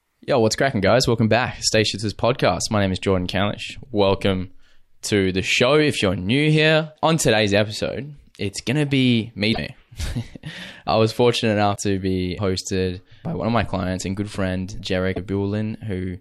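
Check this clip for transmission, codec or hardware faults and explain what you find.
Three short glitches in the speech come from damaged data in a compressed stream, at 9.52–9.58, 11.72–11.77 and 15.11–15.18 s. Corrupted bytes make the decoder misread those frames and lose sync while it hunts for the next header, so each one comes out as a brief glitch.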